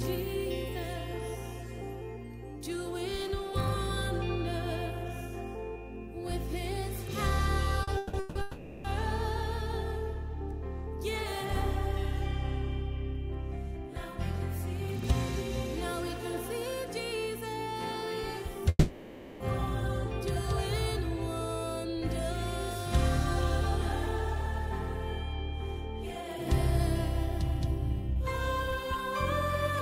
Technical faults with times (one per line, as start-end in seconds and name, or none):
7.83-8.37 repeated stalls (stutter)
8.41-8.86 call audio freeze
18.69-19.42 call audio freeze